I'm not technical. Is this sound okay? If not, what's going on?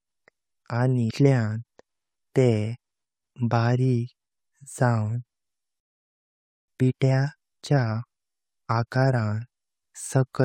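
No, there are three problems in this speech clip.

From 1.07 to 1.11 seconds there is a brief chirp, squawk, click or short hole, a tiny glitch where the speech briefly breaks up. This is damaged data in a compressed stream. A small piece of the stored or transmitted file was corrupted, so the player couldn't make sense of that moment. It then picked up again from the next readable point.

At 5.80 seconds the speech suddenly stops mid-flow and there is silence for nearly a second, until 6.68 seconds, before it resumes. This is a playback stall. The likely cause is that the player ran short of incoming audio, or got held up doing something else, and had nothing to play until it caught up.

Right after the gap, from 6.68 to 9.68 seconds, the speech sounds slightly rushed, about 1.1 times normal speed, yet the pitch stays the same. This is time-compressed catch-up. Having fallen behind during the silence, the player trimmed out tiny slices of sound and blended the edges together to get back on schedule, which makes the speech hurry.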